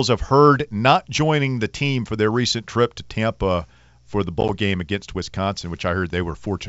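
From 4.41 to 4.50 s, between "for the" and "game against", the sound drops out in brief hard-edged holes, then returns slightly distorted. This is packet loss on an ADPCM call: about 30 ms of packets, in runs no longer than 10 ms, vanished over 80 ms. The 64 kbit/s G.722 decoder's predictor and step size then briefly lost track of the sender's.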